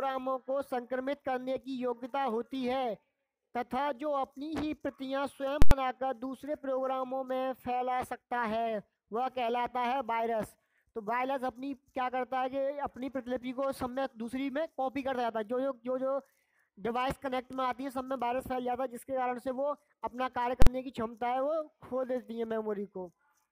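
At 5.62 s (93 ms) and 20.62 s (46 ms), invalid numbers at full scale pin whole blocks to one extreme value, giving loud bangs with silence inside, unlike clipping's distorted sound.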